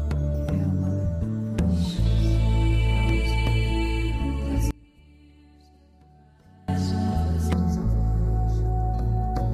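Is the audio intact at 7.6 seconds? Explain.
No. From 7.53 to 9.53 s the sound turns hollow and phasey, a channel delay (comb filtering): one channel lags a fraction of a millisecond, cancelling at evenly spaced frequencies starting around 3 kHz.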